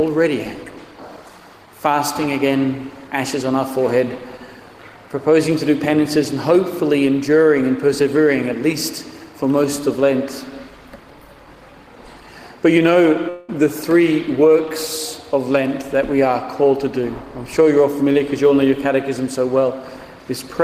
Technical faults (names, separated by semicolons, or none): long network dropout